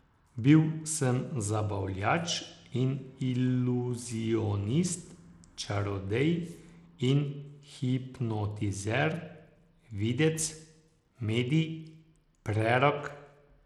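From start to end, this speech has gritty, coarse treble that flickers in and out, with an aliased hiss, most likely Bluetooth SBC compression at a bitrate near 96 kbps. Unlike a clean low-pass, the top bands starve unevenly, so the highs sputter rather than simply fading.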